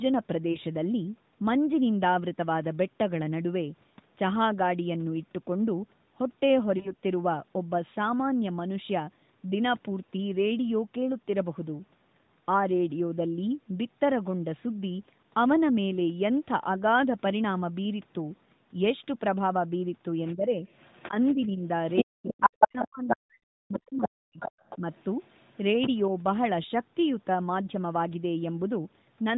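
A brief dip or warble interrupts the sound at 0.52 to 0.58 s, and again at 6.78 to 6.93 s. These are lost AMR speech frames: each time a single 20 ms frame failed its check, and the decoder filled the gap by repeating the previous pitch and vocal tract settings at lower gain before real frames returned.

From 20.25 to 23.17 s a second voice comes through, at about 5 dB above the talker's level. It returns from 23.74 to 25.98 s, much fainter at about 10 dB below. This is the other side's voice leaking through, likely from the loudspeaker into the microphone, where the echo canceller left part of it behind.

Overlapping that, from 20.35 to 24.84 s, the talker's own voice keeps sinking and cutting out in pieces, for about three seconds in total, with the deepest drops near 40 dB. This is speech suppressed in double talk, likely caused by the echo canceller turning down everything while both sides spoke at once, because it could not tell the talker from the echo.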